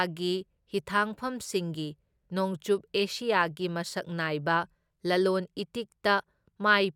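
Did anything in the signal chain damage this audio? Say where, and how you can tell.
No, nothing in the signal chain stood out as damaging this speech on listening.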